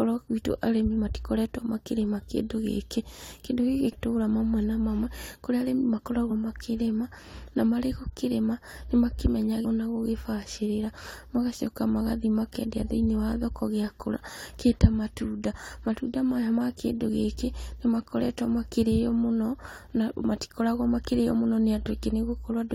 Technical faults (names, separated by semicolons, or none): damaged data in a compressed stream